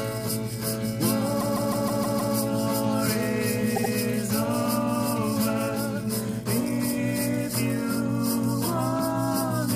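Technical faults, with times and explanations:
Throughout, mains hum: a steady, prominent 60 Hz tone, roughly 10 dB below the signal, from power-line interference coupling into the recording path.
1.40–2.34 s and 3.75–3.91 s, repeated frames: a 156.7 ms block replays six times, then a 78.4 ms block twice, producing a stutter that adds about 1.1 s.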